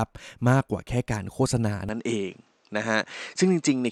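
From 1.89 s on, the speech turns duller with no gap or level jump, likely because the input switched to a poorer device. Nothing passes above 8.3 kHz, so a spectrogram shows a flat ceiling there, and a faint new noise floor sits about 40 dB down.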